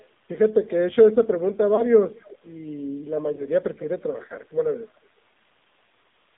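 Throughout, the AMR narrowband mobile codec confines the speech to about 200 Hz to 3.7 kHz, with a plainly buzzy, synthetic quality that fits its 7.4 kbps mode. At 1.76 to 1.83 s and again at 3.36 to 3.45 s, lost AMR speech frames force the decoder to reuse earlier settings at fading gain, each causing a brief dip or warble that sounds like one missing frame.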